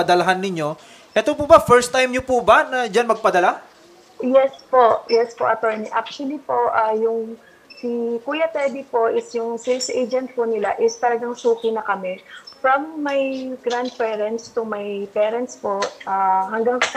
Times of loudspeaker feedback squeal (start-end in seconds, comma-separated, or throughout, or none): none